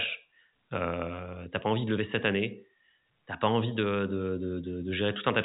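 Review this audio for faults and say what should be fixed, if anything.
No faults found in this speech; nothing needs fixing.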